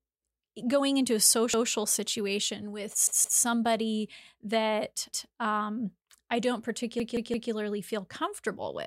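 Repeated buffer stutters occur at 1.54 s after "going into a", at 3.07 s, at 5.12 s before "um I don't", and at 7.00 s after "that um I don't". Each time, a 171 ms chunk, which fits an 8192-sample buffer, replays once, twice, once and three times, with a hard seam at each join. On a waveform and spectrogram, identical blocks sit side by side with abrupt vertical edges. Little if any audio is lost.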